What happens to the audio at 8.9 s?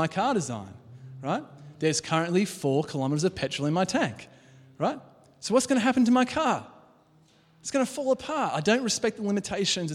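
Nothing goes wrong at 8.9 s; the speech carries on intact through that moment.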